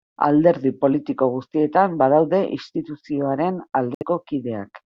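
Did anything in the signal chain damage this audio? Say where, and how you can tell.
Yes. After "politiko guztietan badaude instituzioaren", the speech cuts to silence from 3.95 to 4.03 s, then resumes further along, as if it had kept playing. This points to the playback link, likely a Bluetooth dropout, where a few late packets were discarded.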